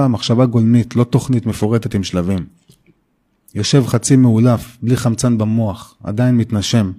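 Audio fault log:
No fault is heard in this speech clip.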